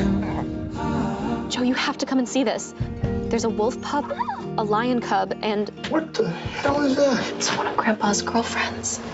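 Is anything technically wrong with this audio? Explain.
No, nothing here sounds technically wrong.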